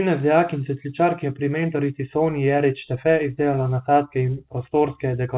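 Nothing goes wrong in this one; the speech just comes through a call path whose band stops at 4 kHz, which fits G.711 mu-law at 64 kbps and is simply how that codec sounds.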